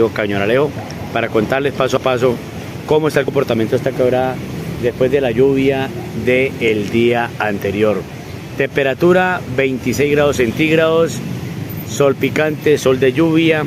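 Compressed frames were skipped three times, at 1.97, 3.28 and 7.60 s, so the audio jumps ahead by roughly 30, 70 and 30 ms, which fits 32 ms frames.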